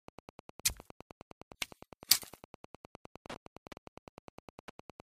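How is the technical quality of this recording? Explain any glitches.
The recording is compromised by Wi-Fi interference running through the whole clip. A nearby Wi-Fi radio's beacon, sent every 102.4 ms, is rectified by the audio circuit, giving a steady ticking about ten times a second, roughly 20 dB below the sound. A spectrogram shows evenly spaced thin vertical broadband lines; the waveform shows regular small spikes.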